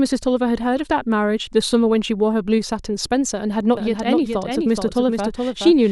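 At 3.77 s a doubled audio track begins and runs to the end: a second, full-band copy of the speech trails the original by roughly 0.4 s, a few decibels quieter. It switches on abruptly and never decays or picks up room colour, which separates it from a reverberant echo that fades and sounds filtered. The likely cause is the same signal arriving again through a slower path or an edit holding two offset copies.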